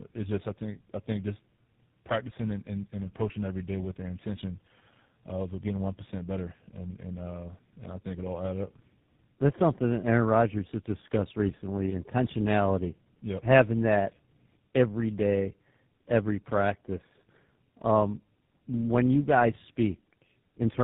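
The speech sounds rough, muffled and warbly for the whole clip, with nothing above about 3.8 kHz. This is tandem speech coding. The call appears to have crossed several networks, each decoding the audio and re-encoding it in its own format. The character fits three speech codecs in a row, ending in GSM full rate. Each coder has to model audio already distorted by the one before it, so the errors compound.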